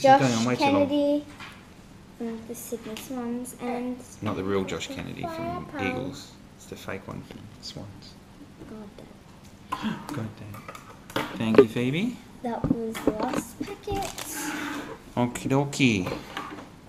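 No technical faults are audible.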